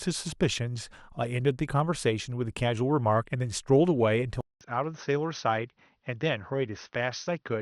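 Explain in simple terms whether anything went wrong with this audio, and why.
At 4.41 s the speech stops for a fifth of a second, then comes back duller, slightly quieter and with a faint new background noise, lacking all sound above 6.2 kHz. This is likely an input switched to a poorer device, which passes a narrower band.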